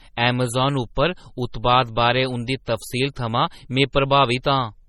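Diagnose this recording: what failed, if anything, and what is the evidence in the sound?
The codec stage failed. The speech sounds watery and swirly, with nothing above 16.9 kHz. That is likely MP3 compression at a low bitrate, which fits roughly 32 kbps. Starved of bits, the encoder cut the treble and let weak frequency lines flicker.

Pre-echo comes from the same codec. Short hiss bursts precede sharp attacks at 0.95, 1.52 and 3.93 s, each lasting about 15 to 17 ms. Quantisation noise sized for the loud attack spread across its whole block, filling the quiet moment before it.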